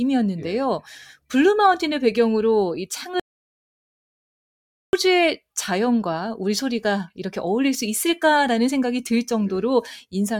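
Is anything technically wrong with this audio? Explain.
Yes. From 3.20 to 4.93 s the speech cuts out mid-flow in an audio dropout to silence, losing about 1.73 s. The input was likely lost while silence kept being written. Unlike a natural pause, no room tone remains. The gap is dead silence.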